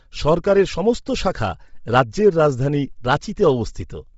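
Across the speech, the top end sounds breathy and grainy, with noise standing in for detail and nothing above 7.7 kHz. The likely cause is Bluetooth LC3 compression: coding in 7.5 ms frames at a rate fitting 24 kbps zeroes the upper spectrum and refills it with noise.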